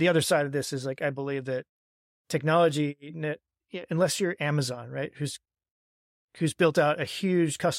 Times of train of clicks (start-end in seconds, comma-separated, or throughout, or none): none